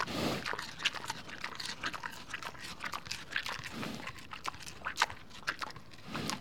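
Listening closely to this recording of everyday sound, nothing stood out as a technical problem at any point.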